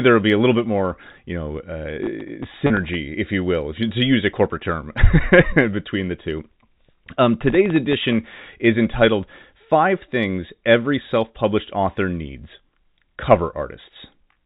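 Right after "more you know uh", from 2.04 to 2.95 s, processor overload crackle sets in. The processor is missing its deadlines for very short buffers, each well under a millisecond, about 30 times in a row, and each miss drops in a sliver of silence with hard edges. The result is a gritty tearing over the speech that stops once the load eases, just before "if you will if". Unlike a single dropout, it is a dense cluster of clicks.

Inside that burst, at 2.67 to 2.70 s, packet loss with pitch repetition takes out about 30 ms in one lost packet. The receiver fills the hole by repeating the last pitch period, so the voice briefly sounds held and slightly buzzy. Because the gap is short, it never fades to silence. What separates it from the surrounding crackle is its smooth, tonal character: one sustained, periodic smear rather than a scatter of sharp edges.

From 7.48 to 8.45 s, ending just before "is entitled", the same processor overload crackle returns with a similar run of missed sub-millisecond buffers, each leaving a small silent gap. 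It produces the same rough, tearing texture over roughly a second, with a shorter chain of misses than the first burst.

Throughout, the G.711 telephone coding restricts the audio to the narrow telephone band, with nothing above 4 kHz.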